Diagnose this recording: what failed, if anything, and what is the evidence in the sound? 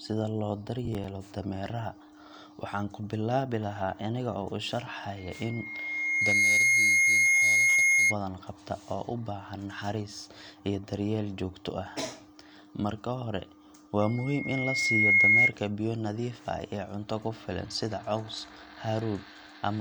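Processor overload crackle in the driver/buffer stage, 0.85 to 1.04 s: a brief gritty tear of several skipped, roughly 5 ms buffers, not one isolated dropout.

Loudspeaker feedback squeal in the acoustic speaker-microphone loop: a lone 2.2 kHz tone swells up at 5.17–8.16 s and 14.01–15.53 s, unlike constant-level hum.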